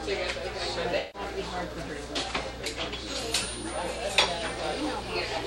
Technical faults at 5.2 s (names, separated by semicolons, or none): none